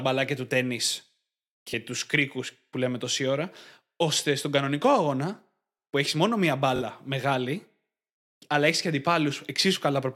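Bluetooth stutter at 1.71 s, before "του κρίκου που λέμε", and at 6.76 s, after "που έχει μόνο μία". Lost packets make the last slice replay, covering 21 then 43 ms, instead of a silent dropout.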